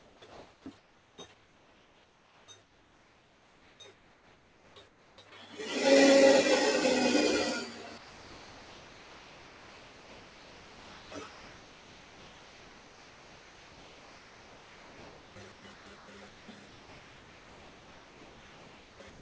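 A speech-tuned noise suppressor applied to music or sounds runs through the whole clip. It treats sustained tones, ambience and decay as noise, letting onsets through while the held parts sink by something like 10 dB. The level pumps and the sound thins out in step with the material. That tracking is what separates it from plain gain riding or a compressor, which respond to overall level rather than to how steady a sound is. Above it, the call path's band limit leaves nothing past 8 kHz.

From 0 to 5.18 s there is comfort noise in place of the background. Most of that stretch, about 4.4 s, is a flat, featureless hiss instead of the real ambience, likely because the sender's voice detector heard no speech and stopped transmitting. The receiver then synthesised noise roughly matched to the background. Unlike a suppressor dip, the replacement is uniform and detail-free rather than an attenuated version of the real sound.

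From 7.98 s to the end at 19.22 s the sound is chopped by the voice detector. Over roughly 10.2 s of that span, pieces of sound drop out and are filled with synthetic noise, likely because the detector switched transmission on and off repeatedly. Quiet edges vanish abruptly. These hard, switched gaps set it apart from the smoother swelling and sinking of the suppressor.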